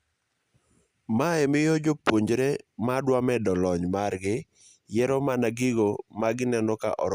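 No technical faults can be heard anywhere in this speech.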